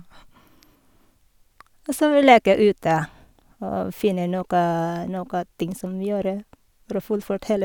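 Nothing stood out on listening to the speech in this clip.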